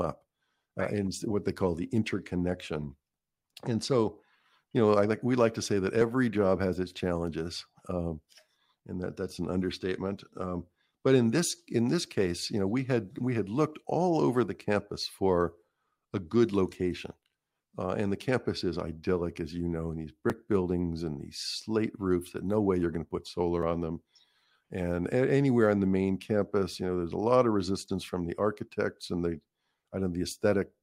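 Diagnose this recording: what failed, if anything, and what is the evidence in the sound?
The capture driver likely failed to collect its buffers before the hardware overwrote them, a dropped buffer (overrun). About 10 to 20 ms of speech vanishes each time, heard as a jump with no gap, at 6.02 s, 20.30 s and 23.63 s, just before "on them".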